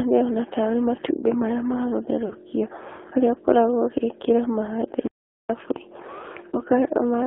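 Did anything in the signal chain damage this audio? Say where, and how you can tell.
Yes. At the codec stage, the whole clip went through the AMR narrowband mobile codec. Its band runs only from about 300 Hz to 3.4 kHz, and the speech has a plainly buzzy, synthetic quality, which fits a low AMR-NB rate near 7.4 kbps.

At the network stage, lost AMR speech frames cause brief dropouts at 2.26 to 2.34 s and at 6.50 to 6.60 s. The first gap is consistent with two missing 20 ms frames and the second with one. The decoder bridged each gap by reusing the last pitch and vocal-tract settings at falling gain.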